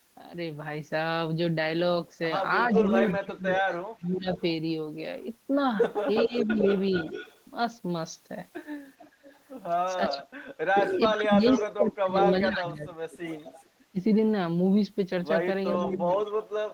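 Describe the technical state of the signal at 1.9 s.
At 1.9 s the speech signal is intact, with no dropout, clipping, glitch or other fault at that point.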